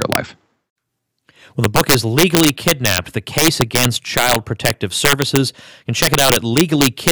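Integer overflow runs through the whole clip. The signal is pushed about 6 dB past full scale. A small fraction of samples, under one percent, exceed the limit and wrap to the opposite extreme. Each loud peak becomes a violent crack, far harsher than clipping.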